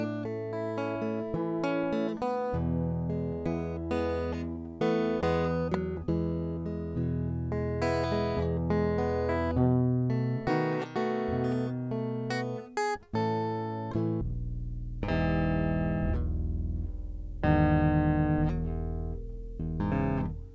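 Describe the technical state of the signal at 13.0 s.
At 13.0 s the music plays through cleanly, with no dropout, click, distortion or other fault in the signal at that point.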